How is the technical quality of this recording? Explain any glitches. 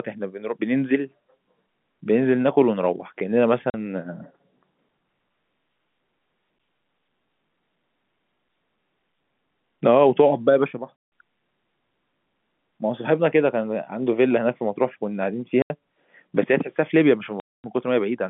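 The recording is telephone-band speech, limited to roughly 150 Hz to 3.5 kHz by G.711 coding, and it has four dropouts. At 3.7, 10.98, 15.62 and 17.4 s there is packet loss filled with silence. Gaps of 40, 160, 80 and 240 ms cut straight to nothing with hard edges. All are multiples of 20 ms, which fits 20 ms packets going missing and the receiver playing silence instead.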